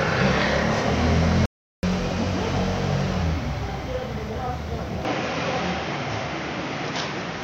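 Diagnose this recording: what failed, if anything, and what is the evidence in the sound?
The sound cuts out abruptly at 1.46 s and resumes at 1.83 s, leaving about 375 ms of silence with no room tone underneath. This is an audio dropout to silence at the capture or driver stage, likely a momentary loss of the input device or its link while the recorder kept writing silence.

From 5.05 s to the end, the sound turns duller and boxier. Nothing remains above 6.9 kHz, the level shifts by about 5 dB, and a faint new noise floor appears, with no silent gap at the change. This is the input switched to a poorer device, likely a narrower-band microphone or headset path taking over the capture mid-recording.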